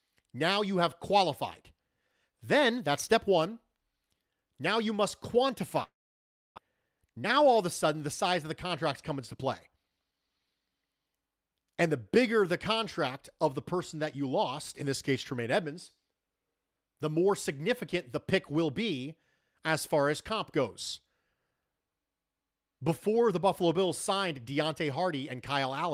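At 5.83 s the speech breaks off in what is likely a long network dropout. The last sound is stretched into a fading buzz, leaving near silence for about 640 ms. Speech resumes at 6.60 s with roughly 400 ms of material lost, and the delay jumps by around a third of a second.

From 6.68 to 8.65 s a jitter buffer speed-up follows. The receiver trims pitch-period slices to drain the backlog, running the speech about 12% fast at unchanged pitch and removing roughly 200 ms. A second pass from 9.10 to 10.12 s runs about 9% fast, removing around 100 ms. Both passes sound noticeably hurried.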